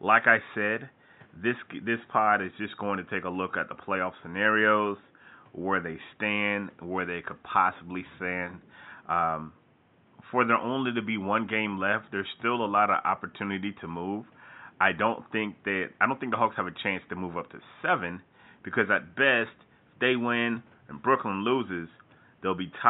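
No technical faults can be heard in the speech, and the only background sound is the room's own noise, sitting about 35 dB below the speech as part of the original recording.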